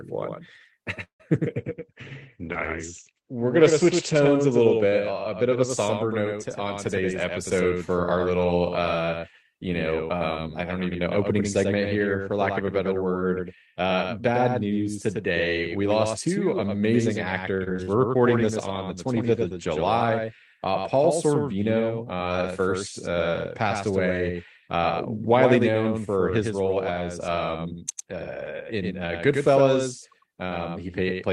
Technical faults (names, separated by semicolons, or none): doubled audio track; call audio freeze; call bitrate drop; jitter buffer speed-up; repeated packet loss (robotic sound)